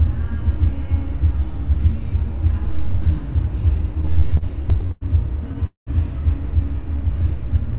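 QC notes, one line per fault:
3.95–5.04 s, repeated stalls (stutter): packets kept reaching the receiver late, so its jitter buffer drained thirteen times in a row, and each time it stretched the last sound to bridge the wait, fading it in the longer gaps, the longest about 97 ms. Around a quarter of that stretch, roughly 250 ms, is bridged sound rather than new audio. Nothing is lost, but the narrowband sound, with nothing above 4 kHz, drags and stutters.
5.67–5.90 s, call audio freeze: the sound halts, the last fragment is carried on briefly and fades, then about 130 ms of silence follows before the audio resumes exactly where it stopped. Roughly 200 ms has been inserted and nothing removed, so the total delay grows by that amount. The likely cause is packets held up in transit that left the jitter buffer empty until they arrived.
6.87–7.30 s, jitter buffer slow-down: with its reserve running low or its target delay just raised, the receiver rebuilt it by repeating single pitch periods and short slices of pauses many times over. 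About 44 ms is added across this span, so the audio plays at roughly 92% speed while keeping its pitch. Sounds come across as slightly drawn out.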